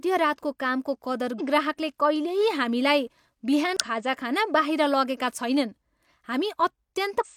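Just after "कामको कदर", at 1.35 to 1.41 s, then 3.77 to 3.81 s and 7.20 to 7.26 s, damaged data in a compressed stream makes the decoder misread frames and lose sync, giving short glitches, each seen as an abrupt waveform discontinuity.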